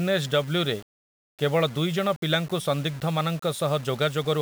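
From start to finish the speech has a gritty roughness, likely low bit depth without dither, which fits rounding to about 6 bits. The error sits only about 25 dB down and, unlike steady hiss, follows the speech, roughening quiet syllables.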